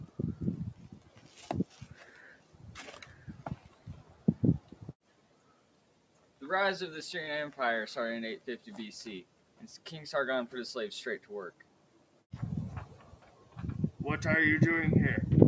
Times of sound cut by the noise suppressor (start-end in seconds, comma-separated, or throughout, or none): 0.92-2.64, 3.06-4.27, 4.60-6.41, 8.39-8.67, 9.24-9.86, 11.19-12.23, 13.12-13.56